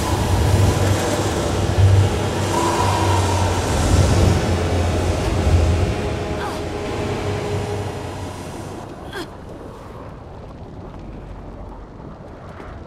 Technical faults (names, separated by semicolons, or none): doubled audio track